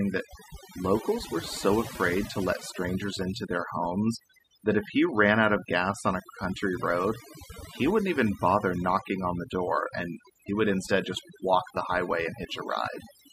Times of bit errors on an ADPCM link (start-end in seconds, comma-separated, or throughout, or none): none